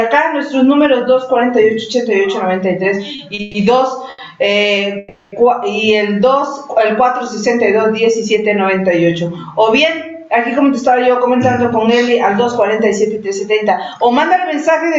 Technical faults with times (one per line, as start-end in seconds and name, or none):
0.00-14.98 gain pumping
3.15-3.40 short stall from a late packet
3.41-3.57 call audio freeze
4.10-4.21 short stall from a late packet
4.98-5.35 call audio freeze
10.64-14.92 jitter buffer speed-up